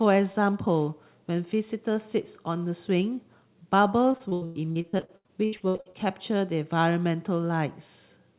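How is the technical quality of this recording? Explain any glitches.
The recording has one clear glitch: a burst of repeated packet loss, giving a robotic sound, from 4.12 to 5.95 s. The speech also has nothing above 4 kHz, which fits a narrowband call codec on the line.

In that stretch, 19 separate gaps land one soon after another. Each one gets covered by stretching the last bit of sound forward, so you hear choppy speech with chunks missing. About 800 ms went missing and 771 ms was patched in, which is roughly 42% of the span. The longest single hole is about 101 ms.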